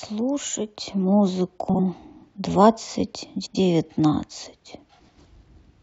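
Frames out of order occur at 1.69–1.80 s, 3.36–3.56 s and 4.99–5.18 s. Each time, adjacent blocks of about 46 ms, then 93 ms and 93 ms, play swapped, giving a garbled flutter. Unlike a dropout or stutter, no time is lost or repeated.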